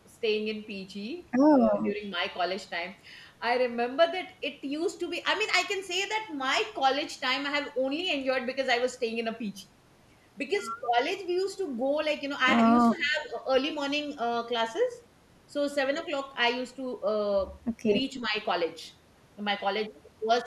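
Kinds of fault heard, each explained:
Speech suppressed in double talk: the speech dips three times, slightly near 1.8 s, by roughly 10 dB near 18.2 s and most deeply, about 15 dB, around 12.9 to 13.4 s. This is likely an echo canceller attenuating during overlapping talk. The waveform envelope sags and the spectrogram fades briefly.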